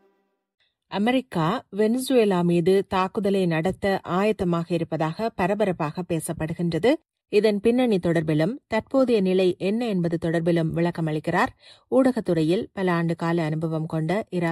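Nothing in this audio stands out as a technical problem, so there's nothing here that needs pointing out.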